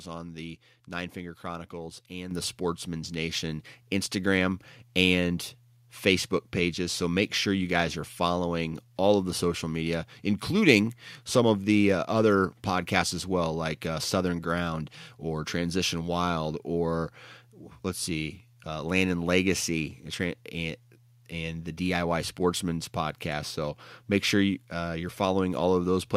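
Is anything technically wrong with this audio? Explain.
Yes. A microphone volume step-up occurs at 2.31 s, where the whole signal jumps by about 7 dB in one instant. The calling software judged the input too quiet and raised the device's capture level in a single move rather than easing it up, so the change lands abruptly. Both the speech and the background noise floor rise together at that moment, which is why it sounds like a sudden level shift instead of the talker getting louder.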